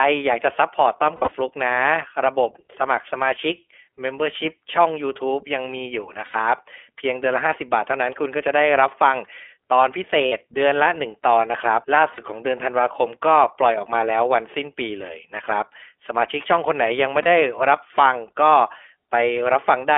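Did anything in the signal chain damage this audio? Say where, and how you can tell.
Yes. At the codec stage, the whole recording carries iLBC codec coloration. The band stops short of 300 Hz and above about 3.4 kHz, which sounds like a narrowband telephone line. The speech has a slightly rough, synthetic edge, and that damage is plainly audible. This comes from the coder rebuilding each 20 ms frame's excitation on its own. The texture fits the 15.2 kbps mode.

At the network stage, there are lost iLBC frames at 1.16–1.33 s, 6.26–6.36 s, 10.26–10.33 s, 12.14–12.20 s and 17.22–17.27 s. The decoder fills each gap by repeating the last pitch cycle mixed with noise, so the speech turns into a brief held, buzzy vowel. The first event is broken up, with 120 ms missing across 160 ms and the longest run about 70 ms. The others last 80, 60, 40 and 40 ms. Clean speech returns immediately after each gap because every frame decodes independently.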